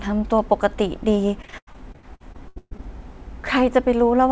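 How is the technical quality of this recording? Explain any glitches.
The recording has one clear fault, a burst of repeated packet loss (robotic sound), heard over a call path that carries nothing above 8 kHz, which fits a wideband codec such as G.722 at 64 kbps.

From 1.42 to 2.81 s, thirteen short dropouts, the longest 131 ms, are each patched by stretching the preceding sound. About 39% of that span is concealment rather than real audio, so the speech turns choppy and robotic, with fragments missing.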